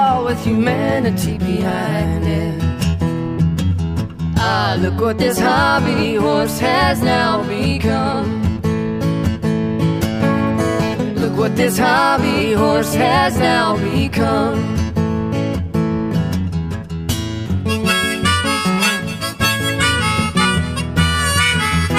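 No technical faults can be heard anywhere in the audio. There is nothing to report about when or how anything went wrong.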